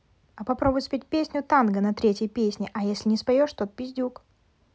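No technical faults can be heard anywhere in this speech recording. Nothing in it calls for a timestamp or a correction.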